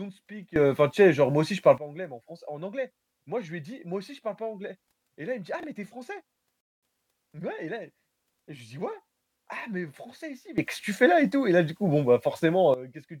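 A speech clip with two sudden gain jumps. From 0.56 to 1.78 s, ending just before "pas anglais mais en", the level sits about 15 dB high, and from 10.58 to 12.74 s about 14 dB high. It switches instantly with no ramp, and the background noise jumps with the voice, which rules out a compressor or a fade and points to a gain setting likely applied without smoothing. At 5.6 to 5.64 s, just before "mais tu es", a short garbled moment comes from chunks out of order: a 10 ms chunk plays three chunks late. Nothing is missing, which separates it from a dropout. At 6.61 to 6.83 s, just before "mais ouais et", a rebuffering stall cuts to 219 ms of silence. The audio then resumes exactly where it stopped, so time is added but nothing skipped, unlike a gap that loses audio.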